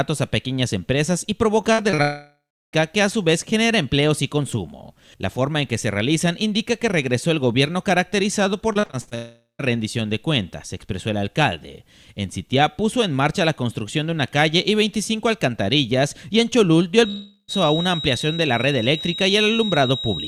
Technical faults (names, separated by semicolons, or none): repeated packet loss (robotic sound); long network dropout; feedback whistle